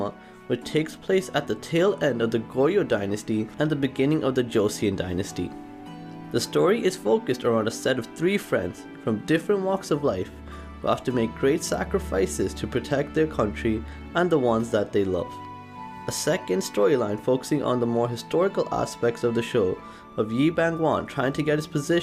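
No technical faults can be heard anywhere in the audio, and the signal stays steady and intact throughout.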